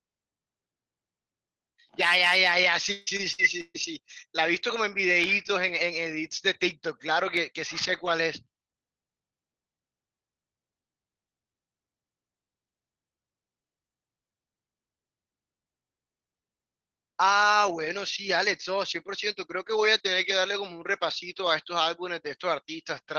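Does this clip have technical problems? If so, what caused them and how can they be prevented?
Yes. From 2.91 to 3.76 s there is repeated packet loss (robotic sound). Four packet gaps arrived, the longest 152 ms, and the receiver filled each by extending the previous audio, so about 43% of that stretch is concealed, giving choppy speech with pieces missing. A steadier network path with forward error correction and a deeper jitter buffer would prevent this.

At 5.24 s and 7.37 s there are single sharp clicks, likely from dropped samples. A fraction of a millisecond of the waveform is missing at each point, so the signal jumps abruptly between values. Larger audio buffers and a less heavily loaded processing thread would prevent these.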